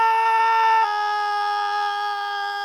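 Damaged data in the compressed stream appears from 0.79 to 0.85 s. Corrupted bytes there leave the decoder misreading frames and losing sync until it finds the next valid frame header, so the sound breaks into a short chirp or blip lasting about 50 ms.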